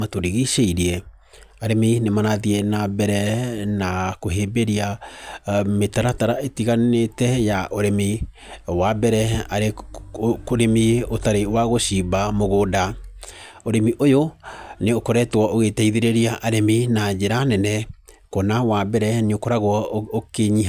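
A speech recording, with nothing technically wrong with it.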